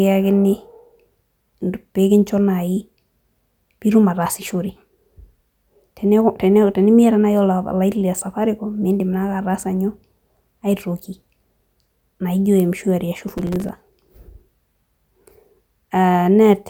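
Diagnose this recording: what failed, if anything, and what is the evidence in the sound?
What failed is the driver/buffer stage, which fell behind in real time. From about 13.29 to 13.69 s the speech picks up a gritty, tearing crackle, then clears straight away. That's processor overload crackle: the machine couldn't fill its very short buffers, a few milliseconds each, on schedule, and missed roughly twenty of them in quick succession. Each miss dropped in a sliver of silence with hard edges, and packed together those tiny gaps turn into that rough burst.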